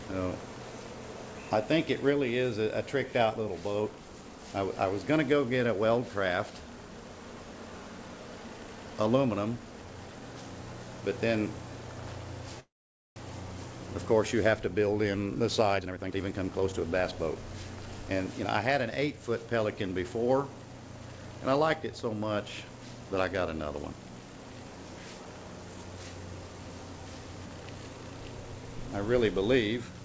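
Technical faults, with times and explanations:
12.60–13.18 s, call audio freeze: sound stalls for 0.56 s, briefly continued then silent about 0.49 s, likely from delayed packets emptying the jitter buffer; waveform shows flat gap, nothing lost.
15.77–17.63 s, jitter buffer speed-up: audio runs about 130% speed at unchanged pitch as roughly half a second is trimmed away; spectrogram shows compressed timing, same harmonic spacing.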